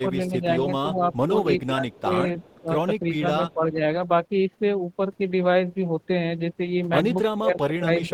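A speech recording whose level repeatedly dips and breaks up, at 0.03–1.31 s, 1.66–2.11 s, 2.61–2.7 s, 3.02–3.81 s and 7.35–8.13 s, falling by up to about 20 dB. This is likely speech suppressed in double talk: with both ends talking, the echo canceller turned this talker down along with the echo. At 1.58–2.0 s and 2.4–2.61 s a faint copy of the voice trails the original by 322 ms, about 20 and 30 dB below it. That echo leak likely comes from a loudspeaker the canceller didn't fully cancel.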